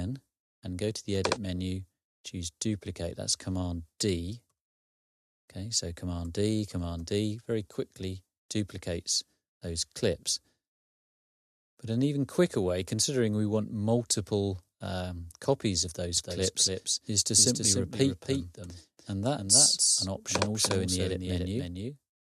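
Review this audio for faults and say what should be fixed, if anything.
At 16.17 s a doubled audio track kicks in abruptly and runs right to the end. A second full-band copy trails the original by around 300 ms, roughly 5 dB quieter, with no decay or room colour, so everything sounds stuttered rather than reverberant. The likely cause is the same signal being picked up again through a slower path, or an edit leaving two out-of-step copies stacked. Cut the late copy from 16.17 s onward. To prevent it, monitor only one route for each source and check for duplicate layers before bouncing.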